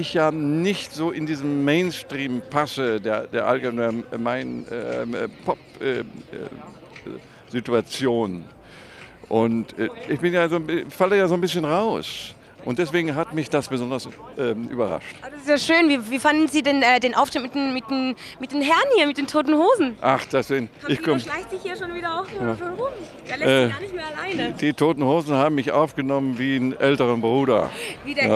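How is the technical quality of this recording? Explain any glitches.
No glitches can be heard in this recording, so there is nothing in its technical quality that needs explaining.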